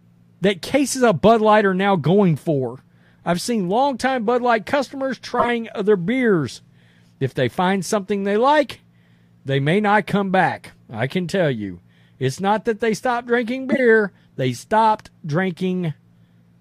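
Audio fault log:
5.39–5.49 s and 13.72–13.79 s, corrupt frame decoded: a loud chirp, squeak, blip or noise burst just before "other beers", then again between "that they stopped drinking" and "they stopped". A few damaged frames each time were played as-is, so garbled gains and codes throw energy at the wrong frequencies for their duration.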